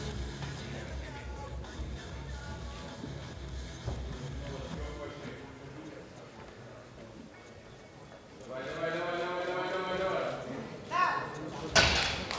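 There are no technical faults to describe at any point in the audio, which has simply passed through ordinary call microphone processing.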